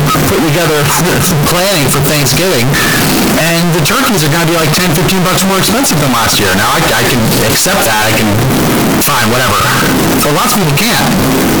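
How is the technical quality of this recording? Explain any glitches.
The quality is poor throughout because of one fault. Float read as integer, from start to end: the speech was likely stored as 32-bit float but decoded as 32-bit integer, so each sample's sign and exponent bits dominate its value. The waveform turns nearly square at an almost constant high level, making everything very loud and harsh, with background noise as loud as the speech, though the pitch can still be followed.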